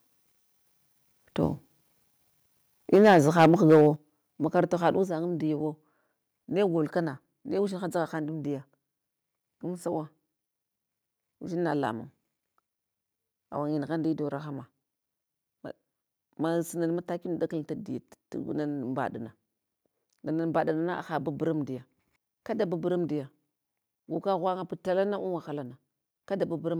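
From 2.93 to 3.82 s the speech breaks into a harsh, crackling edge. This is microphone overload. Peaks run about 8 dB past the converter's limit, and around 7 percent of samples have their tops flattened. An input gain set too high is the likely cause.

The microphone volume is stepped down three times: by about 2 dB at 2.96 s, about 7 dB at 3.96 s and about 4 dB at 5.04 s. Each is a sudden drop in voice and background together. This is likely automatic gain control reacting to the clipping.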